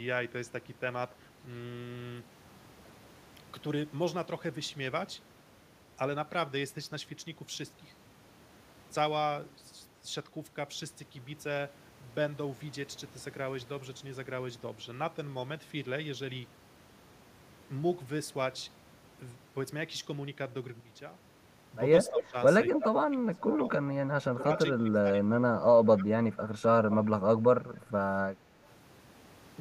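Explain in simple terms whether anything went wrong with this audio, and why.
At 20.80 seconds the whole sound, background included, abruptly drops much quieter and stays there until 21.24 seconds. This sudden gain jump is likely a volume setting changed instantly instead of being eased in smoothly.

From 22.06 to 22.20 seconds a brief, fairly loud copy of the sound trails about a quarter of a second behind. This echo leak likely comes from one side's loudspeaker being picked up by its microphone and not fully cancelled.

The speech then repeatedly dips or fades away: around 22.1 to 22.35, 22.71 to 23.64, 24.34 to 24.50, 24.75 to 26.18 and 26.61 to 27.11 seconds. It nearly vanishes in the last two stretches. This is speech suppressed in double talk, likely an echo canceller muting the talker while both sides spoke at once.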